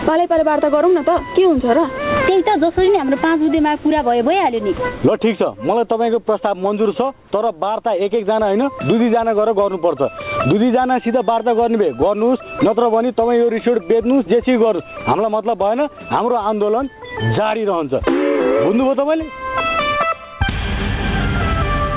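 There are no technical faults to describe, at any point in the clip.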